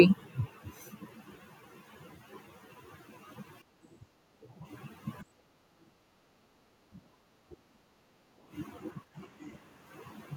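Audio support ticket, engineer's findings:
Speech suppressed in double talk, 3.65–4.65 s, 5.23–7.0 s, 7.35–8.25 s, 9.1–9.18 s. Near-end speech drops in chunks, deepest dips around 25 dB; the last is a brief, shallower dip. Likely echo canceller/suppressor acting during simultaneous far-end talk: can't separate local talker from loudspeaker echo, attenuates both. Longest hit in the 5.23–7.0 s span, roughly a second of speech affected.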